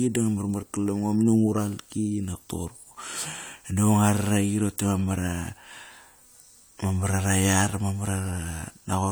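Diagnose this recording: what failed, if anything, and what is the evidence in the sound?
At 0.59 to 0.64 s the speech lurches forward, losing about 20 ms. That is compressed frames skipped at the codec stage: a damaged or missing frame was dropped, and the audio jumps ahead by the length left out.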